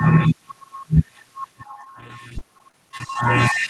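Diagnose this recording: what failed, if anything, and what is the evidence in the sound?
The network dropped packets repeatedly between 1.72 and 3.16 s, giving that choppy, robotic stretch of repeated packet loss. Over a dozen short holes land close together, the longest about 21 ms, and the receiver papers over each by stretching the last bit of decoded sound. That concealment covers roughly 11% of the stretch, so you hear a stuttery texture rather than clean dropouts, all riding on the Opus call path's 12 kHz top end.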